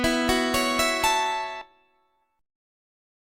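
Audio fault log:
1.61 to 1.72 s, skip ahead: audio that had fallen behind was thrown away while later audio was already queued, so playback leapt forward by roughly 0.7 s of material and cut the lag by about the same amount. The two sides are spliced with almost no gap, only a splice of a few milliseconds, so the sound jumps abruptly from one moment to a later one rather than pausing or stuttering.
2.16 to 2.78 s, jitter buffer speed-up: the receiver's buffer was holding more audio than its target, so it trimmed short slices of one or a few pitch periods again and again to shrink the backlog, removing around 50 ms in total. Playback runs at about 108% speed over this stretch while the pitch stays put, giving a slightly rushed, compressed feel instead of a higher tone.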